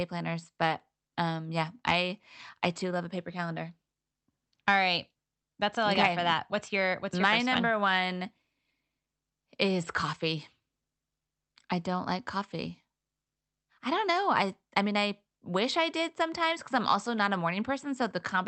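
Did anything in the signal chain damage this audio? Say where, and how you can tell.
Yes. The damage sits at the network and buffer stage, where two clocks disagree. This is clock drift between sender and receiver. The sender's clock runs slow, by roughly one and a half percent. The receiving jitter buffer therefore drains steadily. The receiver cannot wait, so it must keep stretching the audio to avoid running dry. The drift never settles. It is present from start to finish, and it drives everything heard in the second fault.

The audible result is repeated timing corrections, from 0.33 s to 18.01 s. The receiver keeps repeating short slices of the speech to fill the gap. Every edit pushes the same way, so the speech plays at about 98 percent speed. Over the clip these repeats add roughly a third of a second. The edits come at uneven intervals. Each one is tiny, heard, if at all, as a faint hiccup or a slightly unsteady, dragging tempo.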